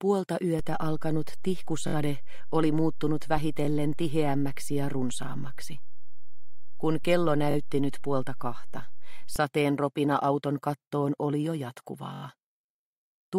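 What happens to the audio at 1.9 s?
At 1.88 s a repeated buffer occurs, lasting until 1.94 s. New audio didn't reach the output in time, so the device replayed the same piece of about 21 ms, which fits a 1024-sample buffer, three extra times. It is heard as a brief stutter or buzz with a hard join at each repeat. Unlike a dropout, nothing goes silent, and the sound resumes without any audible gap in the material.

This moment also falls inside a DC step that began at 0.59 s and holds until 9.36 s. The waveform's zero line jumped to an offset at 0.59 s, as when a converter recalibrates or an offset input is switched in, and stays shifted through 1.9 s. The offset itself is silent here. It is heard as a low thump or click where it begins, at 0.59 s. That separates it from a click fault, which would disturb the sound at the instant.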